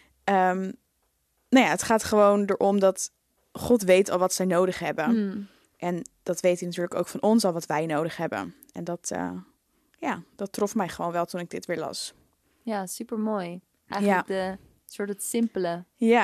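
No technical faults are audible.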